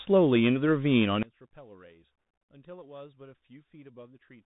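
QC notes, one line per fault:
Throughout: Bluetooth CVSD headset codec. The speech is boxed in below 3.8 kHz, with scratchy s sounds, a grainy hiss underneath, and smearing where louder bright bits outrun the codec's adaptive step. That damage fits a 64 kbps one-bit-per-sample headset link.
1.23 s to the end: one channel inverted, likely. The level drops by about 25 dB and the speech goes faint, as though the centre has been scooped out. That's what you'd get when a polarity-flipped channel cancels the shared mono content on summing.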